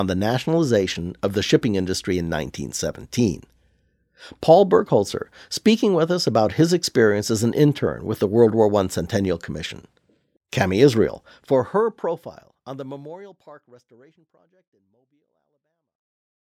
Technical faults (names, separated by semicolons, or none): none